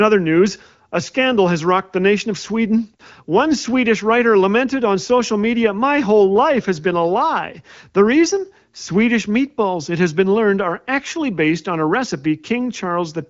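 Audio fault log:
No faults: the speech runs over AMR wideband (HD Voice) at 15.85 kbit/s, with the light coding texture that rate leaves and nothing above 7.5 kHz.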